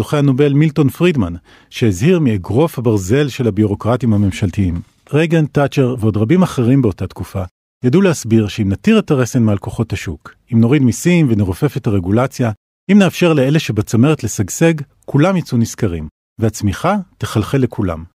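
No technical faults can be heard anywhere in the recording.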